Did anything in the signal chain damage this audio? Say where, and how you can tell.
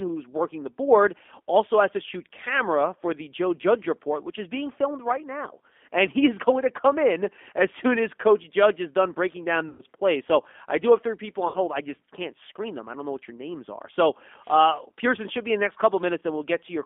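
Yes. There's G.729 codec damage all the way through, at the codec stage. The speech sits in a narrow 250 Hz to 3.5 kHz line band and has a rough, synthetic edge, which fits G.729A at 8 kbit/s, where speech is rebuilt from a filter, pitch and a few pulses.

On the network side, there's VoIP packet loss concealed by the speech codec at 9.69 to 9.82 s and 11.48 to 11.57 s. The decoder stretched its last pitch and filter into a fading buzzy tone or coloured noise, covering roughly 100 ms and 60 ms of missing audio, and it stays weak briefly afterwards.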